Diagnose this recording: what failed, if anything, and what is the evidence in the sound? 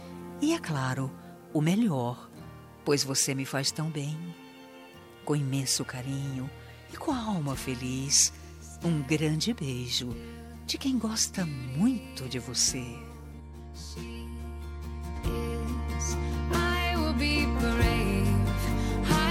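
Channel delay (comb filtering), buffer stage, 13.40 to 15.16 s. The sound turns hollow. One channel lags about 10 ms, so mono summing notches evenly from about 40 Hz.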